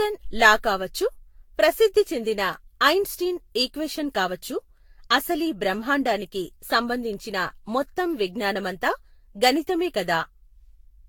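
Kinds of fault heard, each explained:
Generation loss: likely repeated lossy re-encoding, around seven passes, leaving the speech swirly and hollow with blurred attacks; spectrogram shows accumulated holes and nothing above 19.2 kHz.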